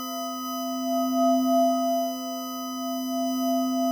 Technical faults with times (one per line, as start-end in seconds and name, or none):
0.00-3.91 USB whine